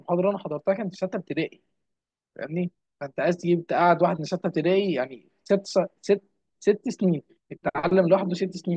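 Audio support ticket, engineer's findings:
Speech reviewed in full on playback: no audible defect found, no component implicated.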